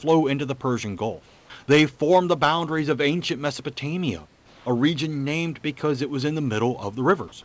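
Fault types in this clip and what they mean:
Comfort noise in place of the background: in two pauses, 240 ms at 1.26 s and 400 ms just before "a region named because", the room's background becomes a flat, featureless hiss about 1 dB and about 3 dB quieter, likely receiver-synthesised noise filling a discontinuous-transmission gap.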